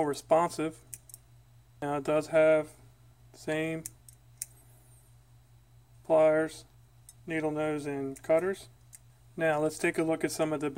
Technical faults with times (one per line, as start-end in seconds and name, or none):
0.18-10.76 clock slip clicks